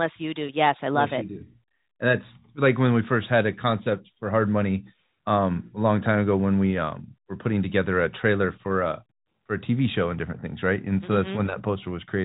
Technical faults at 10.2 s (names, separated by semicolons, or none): none